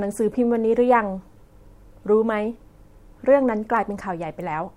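No technical faults are audible anywhere in the speech recording.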